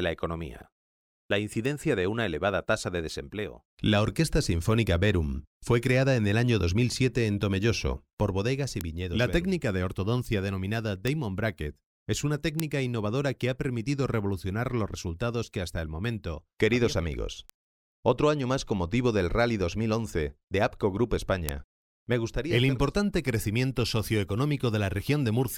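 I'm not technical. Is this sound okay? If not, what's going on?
No. Six sharp ticks at 1.65, 8.81, 11.07, 12.60, 17.50 and 21.49 s are bit error spikes: single flipped digital bits briefly jolting the sound.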